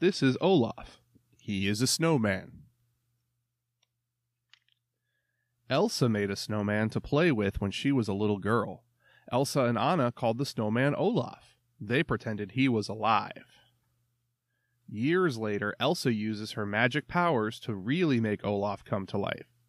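No faults detected anywhere in the speech recording.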